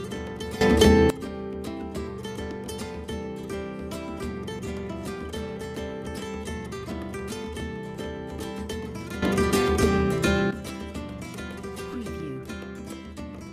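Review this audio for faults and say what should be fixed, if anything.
Sudden gain jumps occur twice: the level steps up by about 16 dB from 0.61 to 1.10 s, and by about 12 dB from 9.22 to 10.51 s, with the background noise rising along with the sound. The likely cause is a digital gain change applied between adjacent samples without a ramp. Apply gain changes through a short ramp or smoothed gain stage instead of an instantaneous step.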